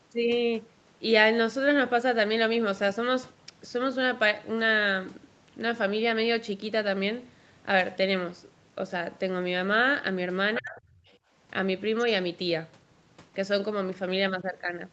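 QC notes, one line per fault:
10.54–10.69 s and 11.05–11.17 s, other side's voice leaking through: a second voice sits under the speech, about 15 dB down the first time and barely audible the second. It is likely loudspeaker echo the canceller missed, not crosstalk.
10.59–10.8 s, speech suppressed in double talk: the talker's own voice ducks hard, by roughly 25 dB, for about 200 ms, overlapping the first leak. This is likely the canceller clamping down while both sides spoke. It is a deep dip that recovers, not a clean dropout to silence.
11.18–11.31 s, background gated by the echo canceller: the room tone, not the speech, sinks by about 16 dB for around 150 ms right after the second leak, then comes back as the canceller releases. The ambience pumping, rather than the voice, separates this from double-talk suppression.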